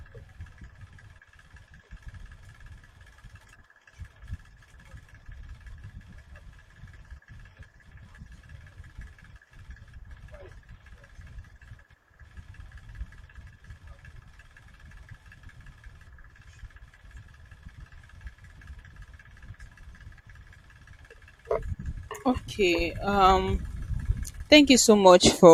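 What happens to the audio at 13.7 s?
Nothing goes wrong at 13.7 s; the speech carries on intact through that moment, with no dropout, click or distortion.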